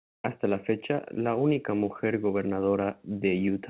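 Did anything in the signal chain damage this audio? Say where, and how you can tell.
No, nothing in the chain damaged this speech; it went over a normal call path through a G.711 mu-law codec at 64 kbps, which is why there's nothing above 4 kHz.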